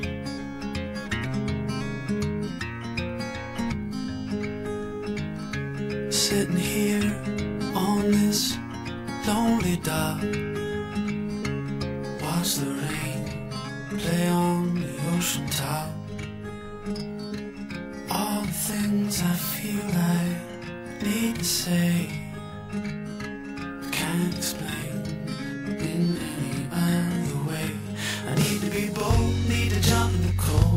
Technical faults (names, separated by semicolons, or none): channel delay (doubling)